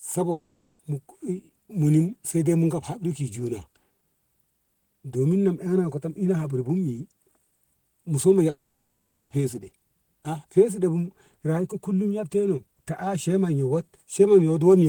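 Long network dropouts occur from 0.31 to 0.80 s and from 8.50 to 9.31 s, where the speech breaks off and resumes later with the intervening audio gone. In the first gap the last sound is stretched into a fading buzz for nearly the whole half second before a very brief silence. In the second the buzz decays and leaves about 0.55 s of silence. The likely cause is packets failing to arrive, with the player concealing the loss until it gave up.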